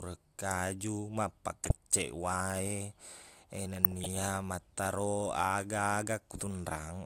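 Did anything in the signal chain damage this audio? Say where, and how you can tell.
Yes: DAB burbling at the codec stage, 1.62–1.73 s and 3.76–4.06 s. Bit errors corrupt MP2 sub-band levels, showing as flickering spectrogram blocks and short noise blips.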